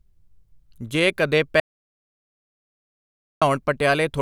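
An audio dropout to silence runs from 1.60 s to 3.42 s, about 1.81 s of lost speech. The input was likely cut off while recording continued, so silence fills the gap. The speech stops abruptly, the room tone vanishes entirely, then speech resumes mid-flow.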